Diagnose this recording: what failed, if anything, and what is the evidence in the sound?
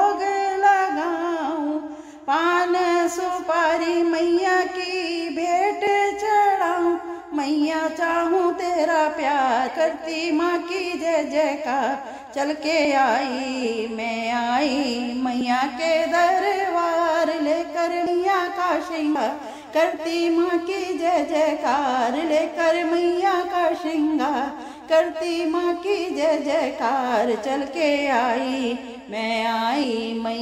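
The codec or storage stage failed: compressed frames skipped. The audio jumps forward abruptly at 5.87, 12.85, 15.41, 18.06, 19.15 and 29.84 s. The missing stretches run from roughly 70 ms to 200 ms, which fits losing whole 32 ms frames a few at a time. The decoder dropped frames that were missing or rejected as damaged, so playback jumps ahead by the length of the frames left out.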